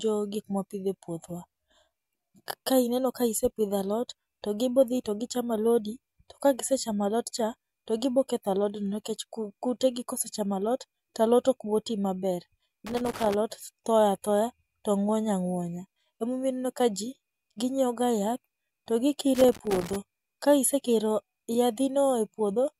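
At 12.87 s the speech breaks into an irregular burst of crackle and scratching that lasts until 13.34 s, and a second, slightly longer burst follows from 19.35 to 19.96 s. Both are loose connector crackle: a worn or dirty contact somewhere in the signal path is making and breaking as it shifts. Each interruption chops the audio, and any DC present on the line turns the transitions into sharp pops.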